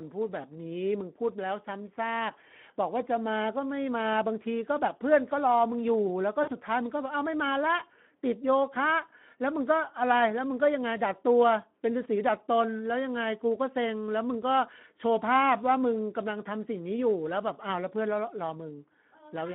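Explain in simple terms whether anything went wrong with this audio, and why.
Two things went wrong. The whole recording passed through the Speex codec, an older low-bitrate speech codec. It has too few bits to rebuild the voice accurately, so speech sounds noticeably hoarse and grainy throughout, and the narrow phone-line band takes away its brightness.

At about 6.43 to 6.53 s, there is VoIP packet loss concealed by the speech codec. Roughly 40 ms of audio went missing, which points to two lost packets. The decoder filled the gap by stretching the last sound into a fading buzz or noise, and the voice stays weak or distorted briefly afterwards.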